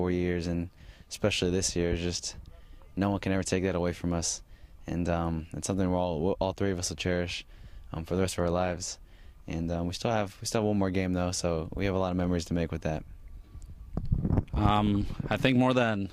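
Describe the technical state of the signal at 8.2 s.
At 8.2 s the audio is intact, with no dropout, distortion, glitch or other fault.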